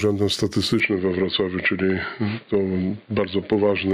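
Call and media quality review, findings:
Gain pumping, whole clip: level swinging around 10 dB. Likely input gain set way too hot with a fast limiter clamping each peak, so loud and quiet get squashed together.

Input switched to a poorer device at 0.8 s, lasting to the end: nothing above 4.7 kHz, sound goes dull, fresh noise floor roughly 45 dB under. No gap, no real level jump. Likely a swap to another mic or headset call profile.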